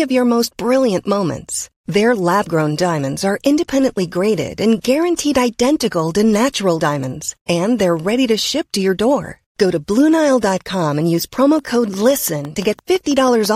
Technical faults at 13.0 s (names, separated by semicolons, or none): train of clicks